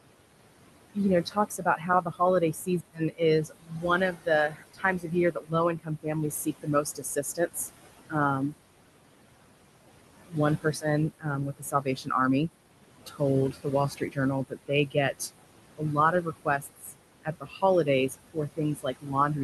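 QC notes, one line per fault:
Throughout, noise suppressor artifacts: steady room noise is pushed down by about 21 dB between phrases, leaving a residue that the spectrogram shows as a flickering, patchy noise floor.
0.94–7.58 s, 10.27–12.10 s, 13.06–15.21 s, 15.78–16.93 s, 17.24 s to end, speech cut by the noise suppressor: quiet consonants and word endings are treated as noise and dropped by up to about 21 dB, roughly three seconds of the first span and under a second in each of the next three spans, so they sound swallowed. The waveform shows tails clipped short, and the spectrogram shows speech energy vanishing early.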